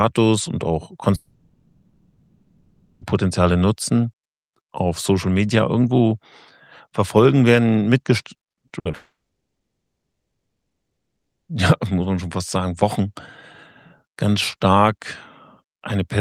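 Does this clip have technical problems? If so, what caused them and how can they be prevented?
Yes. Long network dropouts occur at 1.15 to 3.03 s and 8.95 to 11.49 s, likely caused by the stream stalling. Each time about 1.9 s and 2.5 s of audio is lost. The first gap is covered almost entirely by concealment that stretches the last sound. The second decays to near silence for most of its length. A steadier connection or a larger jitter buffer would help prevent this.

Repeated packet loss (robotic sound) runs from 8.45 to 8.95 s. Seven short holes, the longest 60 ms, are patched by extending the preceding sound, so about 40% of that half-second is filled in and takes on a choppy quality. Reducing network congestion and enabling forward error correction would prevent it.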